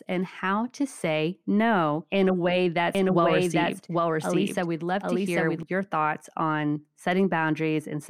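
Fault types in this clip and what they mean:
doubled audio track: From 2.95 s, after "no in a way", a second full-band copy of the speech trails roughly 0.7 s behind at about equal level, dry and uncoloured. It ends abruptly at 5.63 s before "your thoughts on", likely from a slower second capture path.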